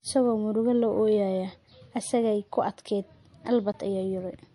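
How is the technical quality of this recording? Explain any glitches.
The technical quality is limited by two faults: a lossy-codec character throughout and one brief dropout near the end.

Low-bitrate audio saved at a high bitrate, throughout: The speech has nothing above 11.2 kHz and the smeared, watery texture of a heavily compressed MP3. The cause is likely an MP3 made at a low rate, around 48 kbit/s judging by the cut-off and artefacts, then re-encoded at a much higher rate such as 256 kbit/s. The second pass enlarges the file but cannot restore the discarded detail, so the first encoding's damage remains.

Block of digital silence at 3.72 s: For about 16 ms the signal drops abruptly to silence and then returns, with no fade on either side. The gap is heard as a short hole in the speech. A block this short points to an output buffer that was not filled in time.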